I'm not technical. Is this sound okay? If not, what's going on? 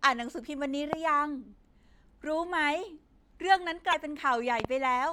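No, there are a few glitches in this speech clip, though they're all very short.

The first kind is a loud pop. At about 0.93 to 0.95 s there's a single sharp pop, much louder than the speech, and at about 4.60 to 4.67 s there are two pops in quick succession. The speech carries on underneath each time. These are most likely electrical jolts getting into the signal, the kind you'd get from a cable being bumped, a switch flicking or a static spark.

The second kind is damaged data in a compressed stream, at about 3.93 s. It's a tiny chirp or blip. A bit of the compressed audio file got scrambled, so the player stumbled over that spot and had to hunt for the next part it could read.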